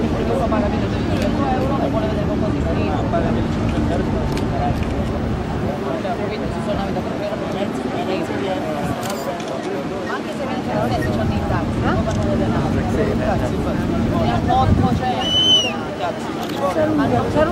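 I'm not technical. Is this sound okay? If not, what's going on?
Yes, it's okay: nothing in it points to a technical fault.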